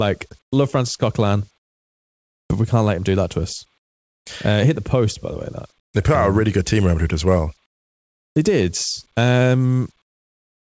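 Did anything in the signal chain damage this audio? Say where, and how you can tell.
Yes. The call processing likely used discontinuous transmission, so pauses starting at 0.42, 1.58, 3.78, 5.80, 7.66 and 10.02 s get comfort noise in place of the background, about 16 to 19 dB quieter and smoother.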